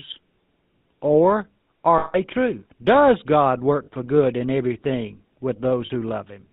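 From the start, the speech carries the buzzy, gravelly roughness of the GSM full-rate codec, and the damage is plainly audible. The codec rebuilds the voice from a vocal-tract model driven by evenly spaced pulses, with much of the excitation thrown away, so nothing survives above 4 kHz. The quality points to the 13 kbps full-rate coder. Unlike simple low-pass band-limiting, the grain itself is the tell: a rasping texture inside the voice, not just lost brightness.

Lost GSM frames break in at 1.98 s for 160 ms, then at 3.84 s and 5.86 s for 40 ms each. At each loss, the decoder keeps reusing the last good frame's settings, so the voice freezes into a rough, metallic ring rather than cutting off. The 160 ms loss rings longer. Unlike a clean dropout to silence or a stutter of repeated audio, these gaps are smeared with a held, tinny tone.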